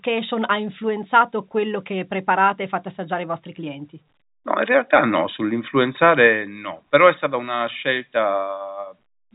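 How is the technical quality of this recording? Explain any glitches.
There aren't any glitches to point out here, just ordinary telephone-band speech with nothing above about 3.8 kHz, the way a regular landline call sounds.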